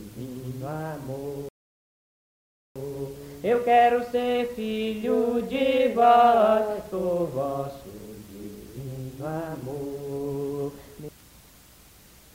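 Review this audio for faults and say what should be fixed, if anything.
A rebuffering stall runs from 1.49 to 2.76 s. Playback goes silent for 1.27 s and then picks up exactly where it stopped. Unlike a dropout, no audio is skipped; the player ran out of data and waited. A larger startup and playback buffer would prevent it.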